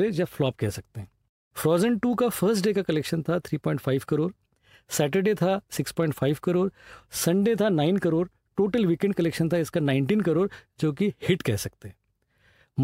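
No technical faults are audible anywhere in the speech.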